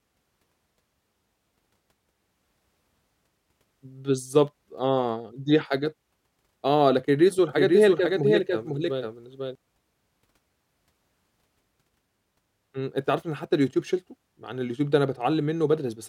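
From about 7.49 s to 9.55 s the speech is heard twice: a second, somewhat quieter copy trails the original by roughly half a second, full-band and dry, with no reverberant tail. It cuts in and out abruptly at those edges. This is a doubled audio track, likely the same signal reaching the mix a second time through a slower path, so two identical copies sit out of step.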